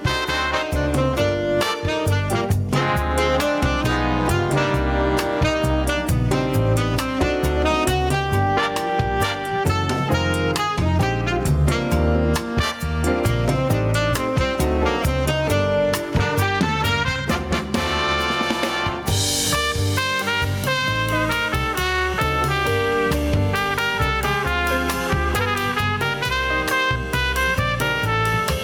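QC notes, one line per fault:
throughout, gain pumping: the level ducks by around 10 dB under each loud sound, likely from gain set far too high and a fast limiter clamping it. The waveform looks flattened.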